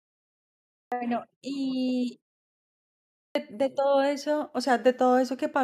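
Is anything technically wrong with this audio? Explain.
Yes. The speech has a clipped start after a pause, twice. At 0.73 s, following 0.73 s of silence, about 190 ms is lost up to 0.92 s. At 3.16 s, after a pause of about 1.0 s, about 190 ms is lost up to 3.35 s. The output path sleeps during silence and needs time to wake before it plays again, so each phrase bursts in abruptly without its opening sounds. On a waveform, flat silence jumps straight into the speech. A spectrogram shows energy appearing at once, with no gradual onset.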